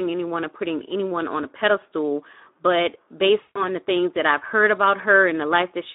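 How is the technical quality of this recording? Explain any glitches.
The quality is limited: a low-rate speech codec colours the whole recording, and one dropout briefly breaks the speech.

The Speex codec runs throughout. The audio is confined to about 250 Hz to 3.7 kHz, giving a narrow telephone-like band. At this setting the codec has few bits to describe the excitation, so voiced sounds come out hoarse and grainy. That damage is plainly audible and points to a rate of around 11 kbps. Unlike a muffled low-pass filter or mains hum, it is a rough, noisy texture inside the voice itself.

VoIP packet loss, concealed by the speech codec, occurs from 3.41 to 3.62 s, between "on a pedestal but" and "the things that I've". About 140 ms of packets went missing, which fits seven 20 ms frames. The decoder filled the gap by repeating its last pitch and filter shape at falling gain, so the sound smears into a fading buzzy tone or coloured noise. 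Unlike a clean dropout to silence or a stutter of repeated audio, it glides, and the speech stays weak for a moment after the gap.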